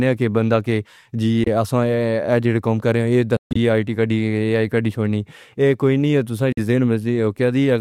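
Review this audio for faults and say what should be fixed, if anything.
The speech cuts to silence three times and resumes as though it kept playing: about 23 ms at 1.44 s, a broken stretch from 3.37 to 3.57 s with one 139 ms gap, and 46 ms at 6.53 s. That's likely a Bluetooth dropout from late packets. Keep the headphones close and away from interference.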